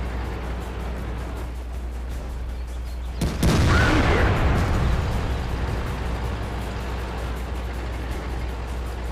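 A steady low tone at 60 Hz runs under the sound from start to finish. This is mains hum. It is loud, only a few decibels below the wanted audio. The likely cause is a ground loop or a nearby transformer feeding the power line into the signal.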